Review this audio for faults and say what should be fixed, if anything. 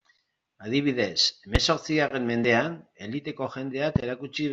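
Two loud pops sit on the speech, at 1.55 to 1.58 s and 3.96 to 3.98 s. Each is a single sharp spike, around 20 dB above the signal. The speech continues underneath. A voltage pulse from a plug, switch or static is the likely cause. Secure connections and ground equipment before recording.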